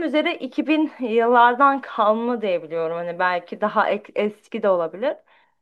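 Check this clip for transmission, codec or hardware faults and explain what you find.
No transmission, codec or hardware faults turn up anywhere in this speech recording. There is nothing to report.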